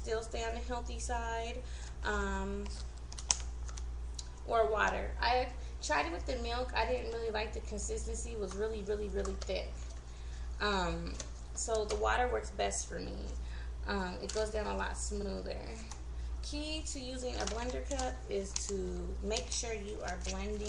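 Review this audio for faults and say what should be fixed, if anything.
A brief stutter at 15.21 to 15.26 s, where the same 46.4 ms of audio plays twice. These are repeated frames: a short run of compressed frames, which fits a pair of frames, was written or sent again, lengthening the clip by 46.4 ms. To prevent it, have the encoder, muxer or transport check frame sequence numbers or timestamps and drop duplicates before writing or decoding.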